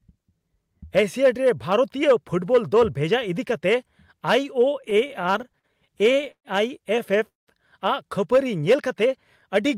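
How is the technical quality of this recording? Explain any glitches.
The recording's got two network-style glitches in the second half, both from audio arriving late rather than going missing.

From 4.81 to 6.47 s there's a stretch of repeated stalls (stutter), 18 little hiccups in about a second and a half, the longest around 133 ms. Packets kept turning up late, so the jitter buffer kept running dry, and each time the receiver stretched out the last bit of sound until more came in. Altogether about 329 ms got padded in, roughly a fifth of that stretch, and nothing was lost. It just drags and stammers through there.

Then at 7.29 to 7.50 s there's a short call audio freeze, about 193 ms long. The sound holds briefly, then drops to silence for most of it, about 180 ms, before picking up exactly where it left off. That's likely the jitter buffer emptying while a batch of packets was held up in transit, which also fits the delay jumping by about the same 193 ms. 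It's an inserted pause, with no audio missing.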